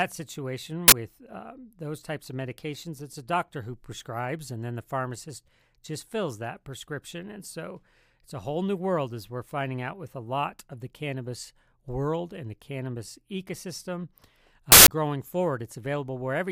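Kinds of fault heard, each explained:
Uninitialised buffer: two short, loud glitches break into the speech, a 40 ms crack at 0.88 s just before "with uh those types" and a 160 ms burst of digital noise at 14.72 s. Blocks were played before audio was written, so leftover memory sounded as samples.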